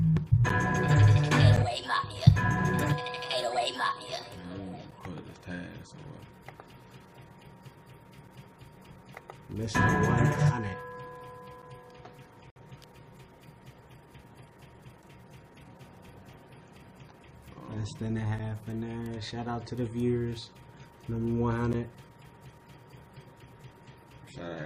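A gap between stream segments occurs at 0.49 s (about 10 ms) and 12.50 to 12.56 s (57 ms). Timestamp mismatches at boundaries consistent with 6-second segments leave holes the player fills with hard-edged silence.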